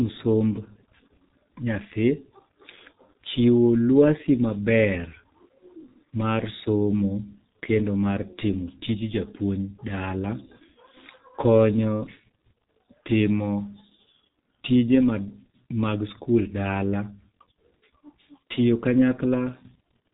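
Throughout the speech, the sound is muffled and hoarse, consonants blur together, and nothing reaches above 3.8 kHz. It has heavy G.723.1 codec damage: coarse 30 ms frames and a slowly updated voice model, consistent with a bitrate near 6.3 kbit/s.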